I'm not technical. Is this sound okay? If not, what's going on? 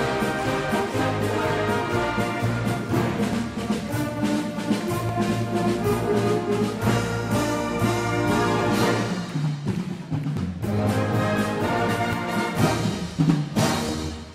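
No, there's a regular click or pop, about every 1.76 seconds, running from roughly 1.6 s to 13.9 s, around seven in all. That steady rhythm likely comes from clock drift buffer slips: two pieces of equipment each keep their own time and disagree very slightly, so the holding area between them slowly fills or drains. Every so often a tiny chunk of sound gets skipped or doubled, and you hear that as the tick.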